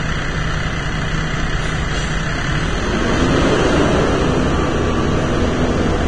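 Throughout, the audio stops at 9.7 kHz and its treble turns to grainy hiss with blurred attacks, likely heavy Vorbis compression, noise-filled rather than MP3-style metallic swirling.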